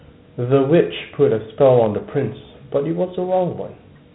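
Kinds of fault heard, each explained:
Dialogic VOX ADPCM: Throughout the clip, the speech carries the gritty, grainy hiss of this telephony codec, which stores each sample as a 4-bit step relative to a running prediction rather than as a full value. The coarse steps leave plainly audible quantisation noise that rides on the speech itself. Nothing sounds above about 3.9 kHz, which points to 8,000 samples a second and fits a 32 kbps stream.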